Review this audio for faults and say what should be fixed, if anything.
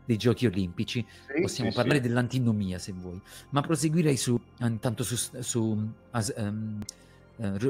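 Three short skips occur at 1.91 s, 4.37 s and 6.82 s, each dropping roughly 40 ms with the two sides butted together. The regular spacing of about 2.5 s points to audio missing between chunks, likely from a recorder or processor losing samples at each chunk handover. Fix the chunk boundary handling so each new chunk starts exactly where the previous one ended, for example with double buffering or overlapping reads.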